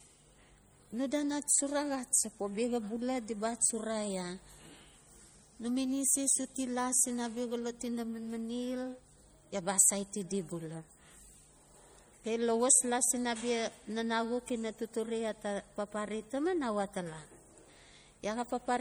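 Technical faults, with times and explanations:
Throughout, MP3 compression: the speech carries plainly audible coding damage, which fits a low bitrate of about 48 kbps. The likely cause is an MP3 encoder short of bits, dropping weak frequency lines that flicker between frames, with nothing above 21 kHz.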